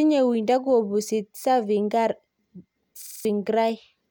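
Speech, with a system hang loop from 3.02 to 3.25 s. One 46 ms slice repeats five times, a rapid stutter at 21.5 Hz. The playback system froze while the hardware kept cycling one buffer, which fits 2048 samples. About a fifth of a second is lost.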